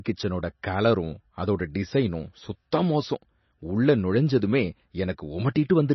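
Heavy MP3 compression runs through the whole clip: nothing survives above about 5.9 kHz, so the speech sounds dull and band-limited, and the sparse upper detail turns watery and swirly as weak components drop in and out. The damage likely points to a low bitrate near 24 kbps.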